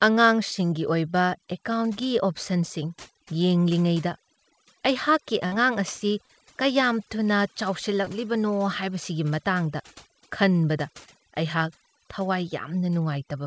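Throughout the clip, overdone noise removal leaves the background near silent with twinkling specks. Quieter parts of the voice were cut along with the estimated noise. The gaps flicker band by band, which sets this apart from a plain gate or a low-pass.

From 5.46 to 5.54 s there is a burst of packet loss. The receiver stretches the last sound for about 56 ms, fading it into a held buzz or hiss, and the speech then resumes with 60 ms missing. That audible fade and the skipped stretch distinguish it from the shorter dropouts.

Short concealed packet loss follows at 6.26 to 6.31 s and at 8.05 to 8.08 s. The receiver fills about 35 ms and then 11 ms, with 40 ms and 20 ms of audio lost. Each is heard as a brief smear or wobble, against a band that stops at 8 kHz, which fits the G.722 call codec at 64 kbps.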